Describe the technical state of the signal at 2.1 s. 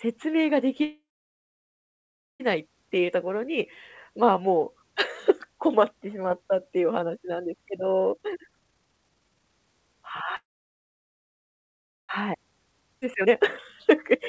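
At 2.1 s the signal is silent, deep inside a call audio freeze running from 0.84 s to 2.42 s. The sound stalls, a brief fading continuation of the last sound gives way to about 1.4 s of silence, and then the speech resumes exactly where it stopped, so nothing is lost and the rest of the clip arrives about 1.56 s late. This is likely a delivery stall that drained the jitter buffer.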